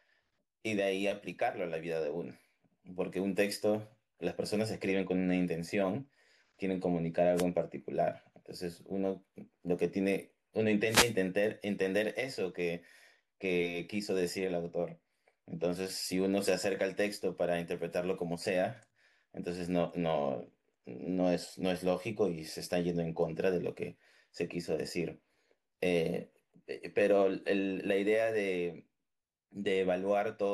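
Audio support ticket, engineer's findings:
Short swish of static over the speech at 7.35–7.45 s and again 10.85–11.16 s, about 0.1 s and 0.3 s long. Wireless microphone noise hit: FM radio link fading as reflections cancel, receiver noise rising through the dropout.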